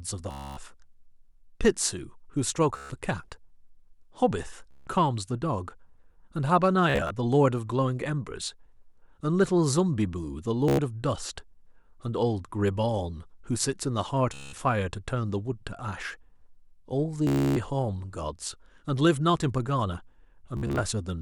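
Bluetooth stutter breaks the speech at 0.31–0.57, 2.77–2.90, 4.71–4.87, 6.90–7.11, 10.68–10.79, 14.34–14.53, 17.27–17.56 and 20.57–20.80 s. Lost packets make the receiver replay its last short buffer, so each gap is a buzzy machine-gun repeat of about 100 to 290 ms. On a waveform it looks like identical copied slices. On a spectrogram it shows as vertical striping. Speech then resumes further on. The 6.90 and 20.57 s events are broken up into shorter runs.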